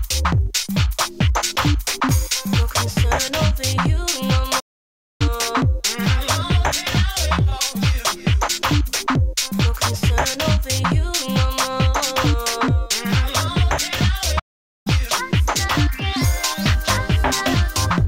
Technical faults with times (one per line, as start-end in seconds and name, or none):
4.59-5.21 playback stall
14.39-14.87 playback stall